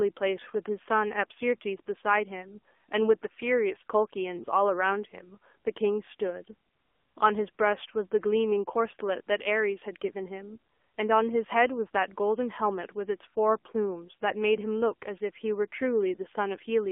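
AMR narrowband mobile codec damage runs throughout this speech clip: the band stops near 250 Hz and 3.4 kHz, and a buzzy, synthetic vocal-tract model suggests a low mode around 7.4 kbps.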